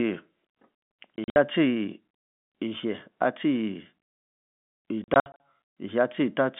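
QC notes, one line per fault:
1.16 to 1.36 s and 5.04 to 5.40 s, packet loss filled with silence: stretches of the speech are replaced by dead silence, 120 ms lost across the first 200 ms window and 180 ms across the second 360 ms window. The gaps are scattered, never longer than 60 ms at a time, and their sizes fit 20 ms packets. Each hole starts and stops abruptly. The narrow 150 Hz to 3.5 kHz telephone band of the G.711 line can be heard around them.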